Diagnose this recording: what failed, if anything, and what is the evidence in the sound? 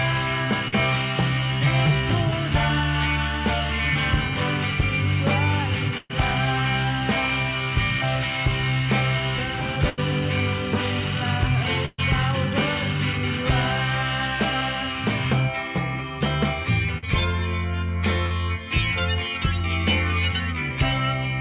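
Short concealed packet loss at the network stage, at 0.68 s, 16.98 s and 18.26 s, each about 40 ms. The receiver bridged each gap by extending the preceding sound, pitched or as shaped noise, then crossfading back. The result is a brief smear or wobble.

Burst of packet loss, also network, at 5.97 to 6.12 s, 9.89 to 10.00 s and 11.85 to 12.01 s, spanning 80 to 126 ms. Concealment sustained and faded the last sound into a held buzz or decaying hiss, then audio resumed with that stretch gone, all within a G.711-style band ending at 4 kHz.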